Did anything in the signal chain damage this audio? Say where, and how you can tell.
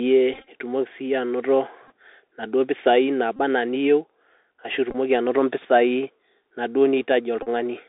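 Yes. The speech sounds dull and scratchy throughout, with a granular hiss and nothing above about 3.7 kHz. That is the Bluetooth CVSD headset codec at 64 kbps, whose one-bit steps can't track sharp sounds.

Brief buzzy stutters occur at 0.34–0.48 s, 1.88–1.91 s, 3.36–3.40 s, 4.91–4.96 s and 7.43–7.48 s. This is a Bluetooth headset packet repeated: lost radio packets were replaced by the previous one, giving a buzz near 267 Hz.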